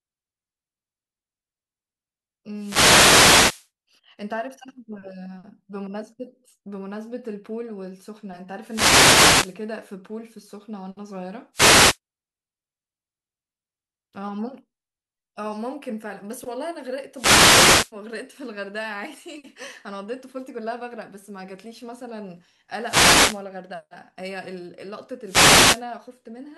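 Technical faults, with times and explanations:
2.54–3.70 s, 8.63–9.60 s, 11.53–11.98 s, 17.13–17.92 s, 22.80–23.44 s and 25.23–25.85 s: wireless microphone noise hits. The FM radio link keeps fading as reflected signals cancel, so the receiver's hiss swells into brief static swishes that sit over the speech.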